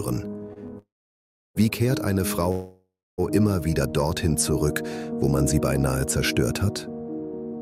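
At 0.53 s a short stall from a late packet holds the sound for about 24 ms and then resumes where it left off, so nothing is lost. On a spectrogram the harmonic bands run flat and slightly smeared for that instant. From 0.78 to 1.57 s and again from 2.51 to 3.20 s there is a call audio freeze, likely from packets held up in transit until the jitter buffer ran dry. Each stretches the last sound into a fading buzz and then drops out, for about 680 ms in the first and 260 ms in the second. The waveform shows a decaying tail followed by a flat gap before the audio resumes, delayed but intact.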